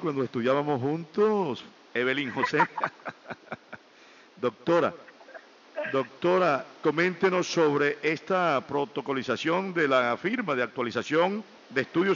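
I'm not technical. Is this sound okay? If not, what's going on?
Yes, this sound is okay, and there's nothing going on with it that needs explaining.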